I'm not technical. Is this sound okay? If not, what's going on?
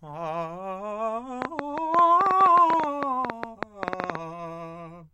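No. A train of clicks runs through the music from 1.42 to 4.16 s: about thirty similar sharp ticks, roughly ten per second at an uneven pace. The likely cause is electrical interference from nearby equipment or a faulty connection or power supply.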